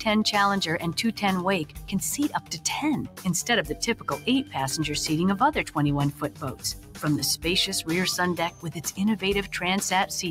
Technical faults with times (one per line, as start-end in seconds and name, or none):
0.00-10.31 noise suppressor applied to music or sounds
1.65-1.91 sound cut by the noise suppressor
2.34-2.65 sound cut by the noise suppressor
3.03-3.26 sound cut by the noise suppressor
3.69-4.27 sound cut by the noise suppressor
6.12-7.03 sound cut by the noise suppressor
8.51-8.93 sound cut by the noise suppressor